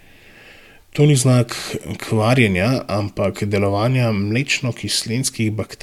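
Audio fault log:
No fault is heard anywhere in the clip.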